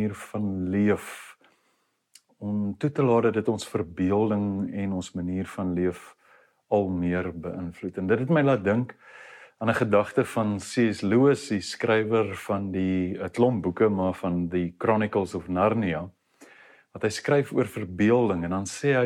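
No technical faults can be heard anywhere in the audio.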